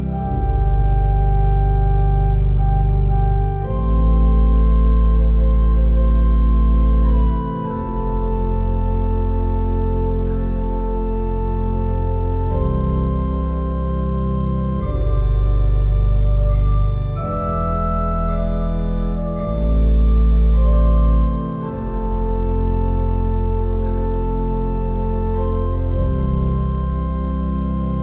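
Nothing here is technically wrong: the audio came over a call line and has nothing above 4 kHz, the narrow telephone band that fits a G.711 mu-law link at 64 kbps, and that's simply how this kind of call sounds.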